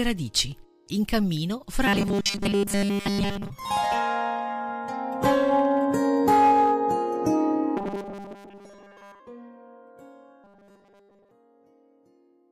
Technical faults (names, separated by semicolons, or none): robotic sound from repeated short buffers